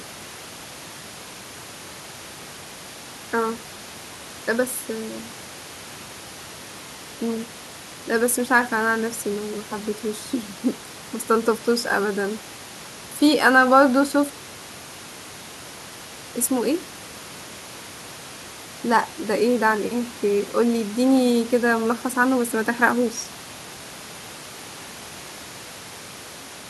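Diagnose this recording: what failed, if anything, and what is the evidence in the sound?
Nothing stood out on listening to this speech recording, with only the room's own background noise sitting about 21 dB below the talking.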